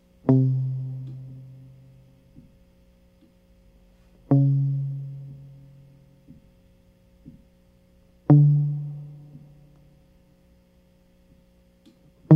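No faults heard in this music.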